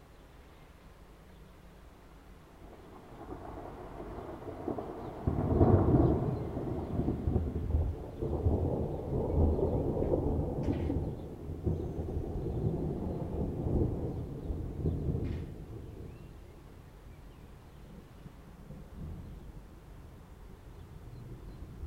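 No technical faults are audible.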